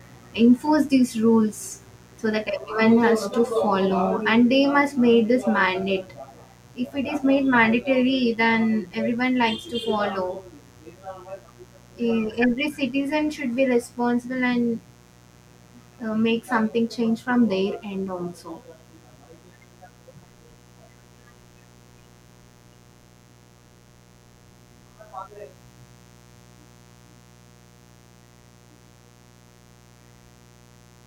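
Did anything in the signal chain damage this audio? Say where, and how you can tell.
Yes, in the analogue wiring ahead of the converter. A mains buzz runs under the speech for the whole clip, steady and raspy rather than a smooth hum, sitting roughly 30 dB below the speech. Its fundamental is 60 Hz, with a dense ladder of harmonics climbing into the kilohertz range. That edge comes from sharp switching spikes, two per mains cycle, from something like a dimmer or rectifier, coupling into an unshielded or poorly grounded line.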